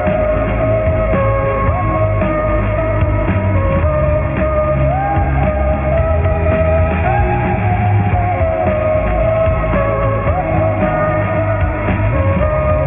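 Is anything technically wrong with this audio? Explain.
Yes. Throughout, the sound has gritty, metallic aliasing: tones that don't belong fold back below a hard ceiling near 3 kHz, sitting around 20 dB under the signal. This suggests downsampling to about 6 kHz without an anti-aliasing filter, so content above 3 kHz mirrored downward.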